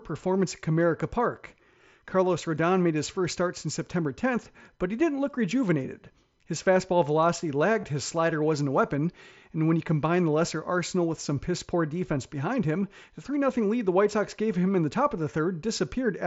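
At 7.81 to 7.84 s, between "fastball velocity" and "his slider wasn't a", concealed Bluetooth headset packet loss occurs. A short run of voice packets from headset to phone went missing, about 22.5 ms of audio, which fits three consecutive mSBC frames. The receiver covered the gap by repeating the best-matching stretch of the preceding waveform, so the sound holds a brief buzzy, steady-level tone before a slight warble as the real signal resumes through the wideband mSBC path.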